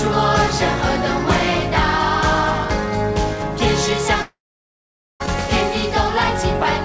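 A long network dropout runs from 4.22 to 5.22 s, likely caused by packets that stopped arriving. The last sound is stretched into a brief fading buzz, then about 0.84 s of silence follows, and about 1 s of audio never returns. The band above 8 kHz is empty throughout, which fits a G.722 call codec.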